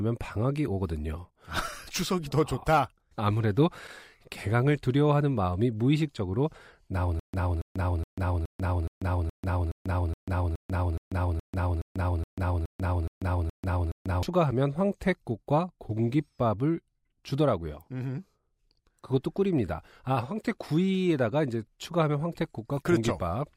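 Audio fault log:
7.20–14.23 s, stutter with silent gaps: a 279 ms fragment repeats every 420 ms with digital silence between, likely a stalled stream replaying its last buffer.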